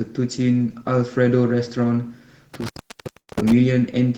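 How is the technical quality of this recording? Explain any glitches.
Two faults break up the second half of the recording.

From 2.54 to 3.52 s there is an intermittent contact: a loose connection opens for roughly 690 ms, dropping the speech out with crackles at the edges and faint hiss in between.

At 3.19 to 3.30 s, a burst of packet loss occurs. The receiver extends the last sound for about 85 ms as a fading buzz or hiss, then resumes with about 80 ms of audio missing.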